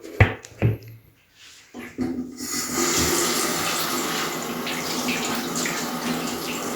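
Nothing in these sounds catches the ear as a technical problem, so there's nothing to point out here.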